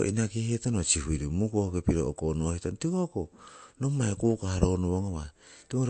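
A speech recording with MP3 compression damage plainly audible from start to finish, likely from encoding at a low bitrate that fits about 48 kbps. Nothing survives above 8.3 kHz, where the encoder cut the treble, and the remaining sound has a watery, swirling quality as weak frequency lines switch on and off between frames. That swirl separates it from a simple low-pass filter, which would dull the top without adding this unstable texture.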